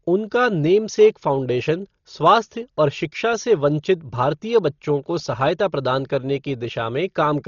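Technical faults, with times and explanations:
Throughout: Dolby Digital compression. The speech is dull and band-limited, with nothing above about 6.9 kHz, and a rough, fluttering noise clings around its tonal parts. This is likely the work of an AC-3 style coder running at a low rate that fits about 32 kbps. It cuts the upper band away and leaves many frequency lines with no mantissa bits. The decoder then fills those lines with dither noise, so the damage here is heavy.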